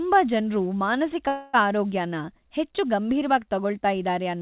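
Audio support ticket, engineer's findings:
Call audio freeze at 1.28–1.55 s in the speech. Last sound stretched into a fading buzz or hiss for about 0.25 s, then audio resumes where it stopped, nothing lost, everything after runs 254 ms late. Likely jitter buffer starving while packets stalled in transit. Worth checking network jitter on that leg. Narrowband G.711 mu-law path, nothing above 4 kHz.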